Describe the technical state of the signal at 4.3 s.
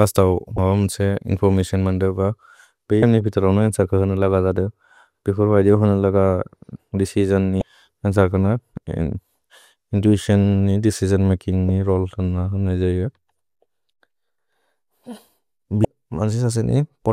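At 4.3 s the speech signal is intact, with no audible fault at that moment.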